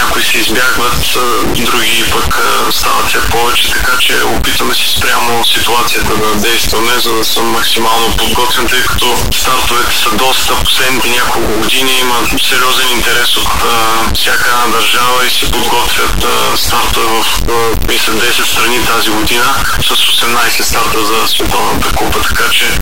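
Harsh, buzzy distortion runs through the whole clip, and even the quiet stretches fill with loud, gritty noise instead of falling silent. The likely cause is a stuck bit: one data line of the converter held fixed, so roughly half the sample values shift by that bit's weight as the waveform moves. Here the bit sits high, with a step of roughly -5 dBFS, which explains why the noise in pauses is so strong.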